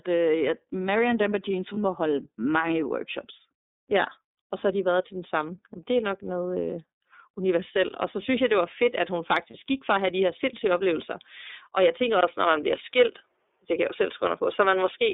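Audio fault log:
throughout iLBC codec: narrowband band of roughly 250 Hz to 3.7 kHz with a rough, synthetic edge on the speech, from 30 ms frames each coded independently at 13.33 kbps, unlike a device change.
1.74 s and 9.50 to 9.55 s lost iLBC frames: a brief held, buzzy vowel of about 30 ms each, before "må holde mange workshops" and between "var fedt at hun" and "gik for at have", with clean recovery at once.
12.21 to 15.14 s input switched to a poorer device: after "jeg tænker", a 20 ms silence, then a duller, boxier tone with nothing above 3.8 kHz, level unchanged and faint noise well below the speech, most likely a change of input.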